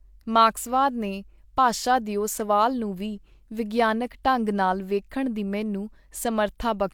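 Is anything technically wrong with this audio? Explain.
No, nothing is technically wrong with this audio.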